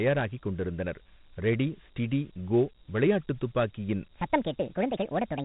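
A speech clip carries Dialogic VOX ADPCM coding from start to finish. Nothing is heard above about 3.8 kHz, so the sound is thin and telephone-like. The coding damage is plainly audible. A gritty hiss trails the speech, because 4-bit adaptive steps cannot track the waveform finely. The 32 kbps rate fits 4-bit samples at 8,000 per second. That is the usual VOX setting for phone menus and voicemail.

From 4.15 s to the end, right after "ஸ்டிடி கோ விளையாட்டு துப்பாக்கியின்", a section at the wrong speed begins. That stretch plays 1.53 times too fast. Pitch rises with it, by roughly seven semitones. The speech turns high and hurried at once. Speed and pitch shift together, so this is not a pitch effect. The likely cause is an editor or player that used the wrong clock for that part.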